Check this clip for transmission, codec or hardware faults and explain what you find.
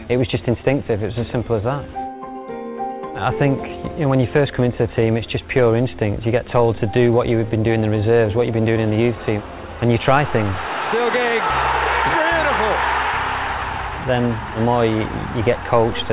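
No transmission, codec or hardware faults were found.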